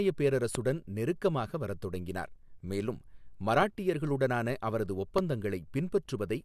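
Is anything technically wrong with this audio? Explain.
Yes. Loud pops hit at 0.55–0.57 s (just before "நெருக்கமாக வரத் தொடங்கினார் மேலும்"), 3.62–3.65 s and 5.18–5.20 s. Each is a single sharp pop about 15 to 20 dB above the speech, likely a voltage pulse added to the signal. On the waveform each shows as a tall spike, and on the spectrogram as a thin full-height vertical line.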